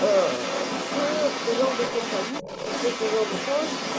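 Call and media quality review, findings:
Other side's voice leaking through, 0.0–3.98 s: echo canceller likely leaving loudspeaker pickup in the mic path; far-end talker audible throughout, only slightly below near-end level.

Speech suppressed in double talk, 2.43–2.47 s: canceller, likely confused by simultaneous talk, ducks the near-end voice; brief drop of roughly 10 dB lasting about 40 ms.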